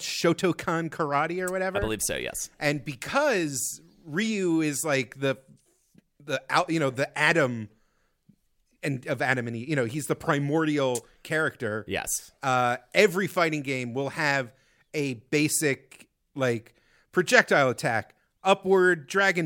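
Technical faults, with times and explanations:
No technical faults heard.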